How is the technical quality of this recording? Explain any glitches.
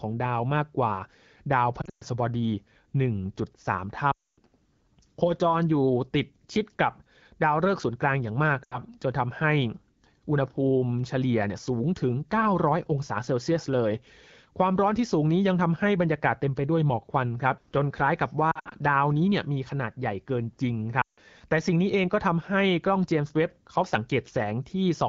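The speech has short dropouts where it smears, drones and fades. These are lost AMR speech frames at 1.81, 4.11, 8.63, 18.51 and 21.01 s, the longest about 0.26 s at 4.11 s. Corrupted frames were discarded, so the decoder stretched the last good pitch and vocal tract settings at falling gain, and the voice returns briefly weak and rough. The AMR wideband (HD Voice) coding itself adds only light damage, and the speech stays clear.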